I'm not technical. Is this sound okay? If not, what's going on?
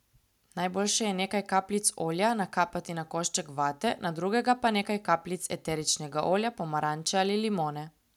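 Yes, no faults heard.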